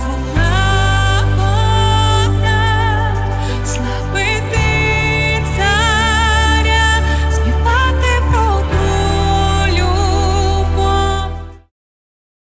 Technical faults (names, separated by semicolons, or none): none